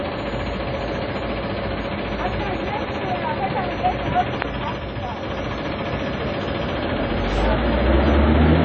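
Throughout, the sound is ringing and washy, with a hiss breathing along with it and nothing above 7.8 kHz, likely WMA compression at a low bitrate around 32 kbps.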